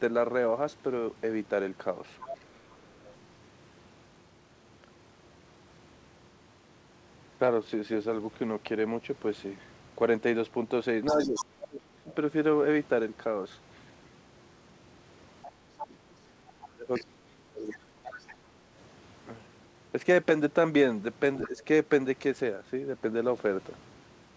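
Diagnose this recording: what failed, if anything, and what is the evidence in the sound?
Other side's voice leaking through at 2.2–3.07, 11.06–11.45, 15.42–18.34 and 21.37–21.65 s, about 10–15 dB under the speech. The likely cause is in call processing: an echo canceller that left loudspeaker residue.

Speech suppressed in double talk at 11.12–12.09, 15.87–17.76 and 21.47–21.58 s, with dips of up to about 35 dB. The call processing likely attenuated everything while both sides overlapped.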